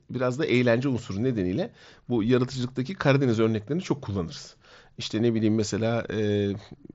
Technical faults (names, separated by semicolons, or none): none